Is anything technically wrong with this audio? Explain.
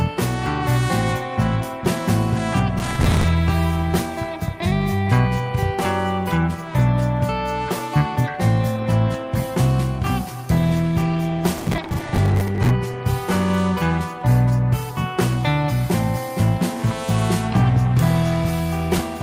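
Yes, two problems. Processor overload crackle shows up from 2.79 to 3.24 s and again from 11.58 to 12.7 s. Gritty tearing suggests the processor kept missing roughly 10 ms buffer deadlines and replaying stale audio. There's also a call bitrate drop from 10.57 to 13.75 s, when bandwidth fell from 64 to 28 kbps for about two seconds. The coarser encoding sounds rough and dulled, with crackle layered over it.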